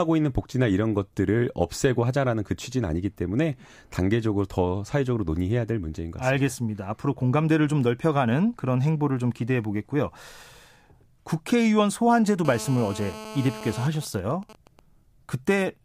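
GSM phone buzz runs from 12.45 to 13.87 s, a hard, raspy 217 Hz tone dense with harmonics, sitting about 14 dB below the speech. A 2G handset in a call nearby is transmitting in bursts 217 times a second, and something in the audio circuit rectifies those radio pulses into an audible waveform. Because the call keeps the bursts regular, the buzz holds steady throughout and bears no relation to the speech.

GSM signalling bursts follow at 13.95 to 14.79 s, the same 217 Hz rate broken into even ticks with a longer buzz twice a second, roughly 20 dB under the speech. The handset is still in its call, but with its user silent it sends only short groups of bursts rather than continuous ones. The circuit rectifies each group separately, so the interference arrives in even ticks instead of a solid drone.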